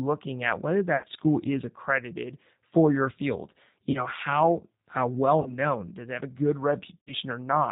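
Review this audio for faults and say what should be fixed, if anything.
The whole recording carries plainly audible G.729 codec damage, which fits G.729A at 8 kbit/s. Speech is rebuilt from a filter, pitch and a few pulses. Nothing above 4 kHz survives, and it sounds slightly rough and synthetic. Use a wideband codec instead.

VoIP packet loss concealed by the speech codec appears at 0.97–1.06 s, after "at whether"; 3.91–4.07 s, before "how how well"; 5.42–5.59 s, before "does it have"; and 6.98–7.14 s. The decoder stretches its last frame into a fading buzzy tone or coloured noise for 30–90 ms. Add jitter buffering and redundancy.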